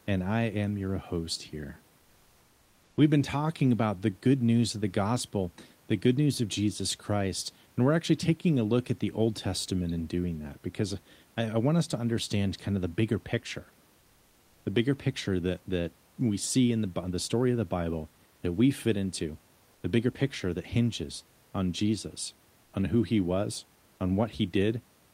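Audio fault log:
19.73–19.83 s and 22.65–22.73 s, comfort noise in place of the background: for 100 ms and then 80 ms, the real room noise, about 37 dB below the speech, gives way to a flat, featureless hiss about 1 to 2 dB quieter, likely from Opus DTX pausing transmission while the receiver synthesises filler noise.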